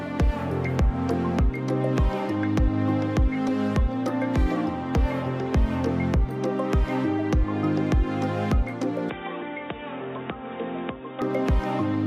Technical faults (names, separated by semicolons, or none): input switched to a poorer device